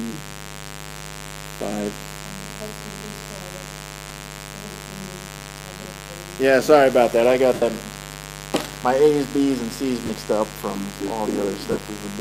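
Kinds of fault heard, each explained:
mains buzz: A steady, raspy buzz sits under the whole clip, roughly 15 dB below the sound. Sharp switching spikes from the mains supply repeat twice per 50 Hz cycle. Their harmonics stretch well up into the kilohertz range.
lost LE Audio frames: Short dropouts occur at 4.09, 7.54, 10.06 and 11.71 s. The decoder filled each gap by repeating the last spectrum with random signs. Tones smear into noise. The 75 ms gap at 7.54 s fades toward silence.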